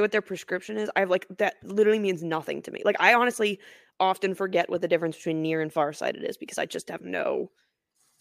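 Dropped samples at 4.62 s and 6.08 s: two sharp clicks in the speech, likely where a fraction of a millisecond went missing and the waveform jumped.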